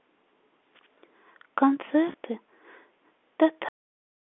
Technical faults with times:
2.12-2.14 packet loss with pitch repetition
3.69-4.23 cut-off end

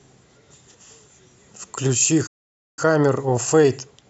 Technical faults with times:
2.26-2.79 playback stall
2.79-4.09 time-compressed catch-up

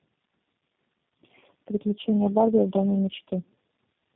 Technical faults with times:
0.00-4.15 tandem speech coding

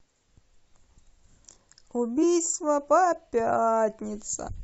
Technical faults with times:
2.22 damaged data in a compressed stream
4.47-4.49 damaged data in a compressed stream

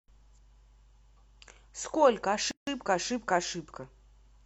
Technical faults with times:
2.51-2.67 gap at a join of encoded pieces

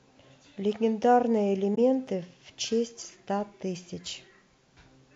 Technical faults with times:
1.75-1.78 corrupt frame decoded

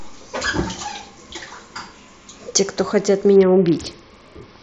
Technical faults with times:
3.36-4.62 Bluetooth SBC bit pool drop

